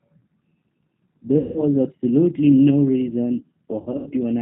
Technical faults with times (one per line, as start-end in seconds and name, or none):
0.00-4.41 G.729 codec
1.38-1.64 VoIP packet loss concealed by the speech codec
3.82-4.11 VoIP packet loss concealed by the speech codec